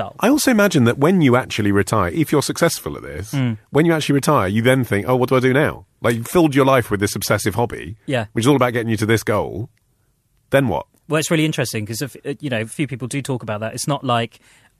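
No technical faults are audible.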